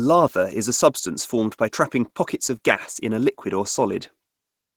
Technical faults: Opus voice compression

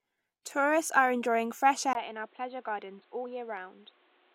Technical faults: input switched to a poorer device

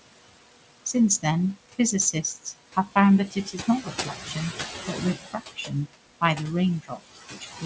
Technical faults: noise suppressor artifacts; speech cut by the noise suppressor

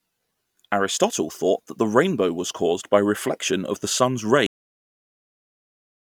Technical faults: cut-off end

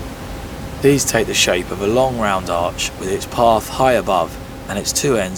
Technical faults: none

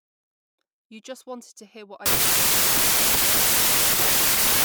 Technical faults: wrong sample width

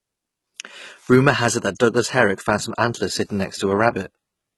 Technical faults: HE-AAC compression

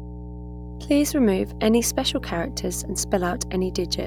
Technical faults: mains hum

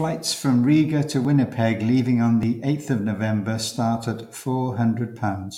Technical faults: dropped buffer (overrun)

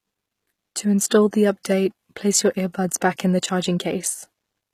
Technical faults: HE-AAC compression; pre-echo

